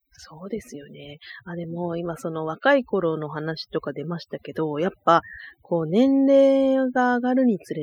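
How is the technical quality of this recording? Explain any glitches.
The main problem is overdone noise removal, present throughout the speech. A noise reducer set too aggressively has cut away frequency bands close to its noise estimate, along with the quieter parts of the voice. This leaves near-silent gaps filled with twinkling specks.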